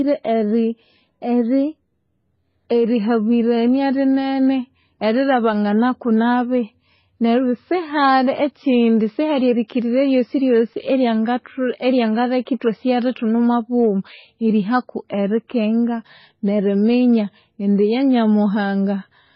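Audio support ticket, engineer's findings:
Transcoding between lossy codecs, whole clip: speech band-limited, nothing above 5.8 kHz, smeared swirly sibilants plus warbly tonal artefacts stacked together. Likely a low-rate MP3 re-encoded to HE-AAC around 24 kbit/s. Spectrogram: hard ceiling at 5.8 kHz, patchy holes below.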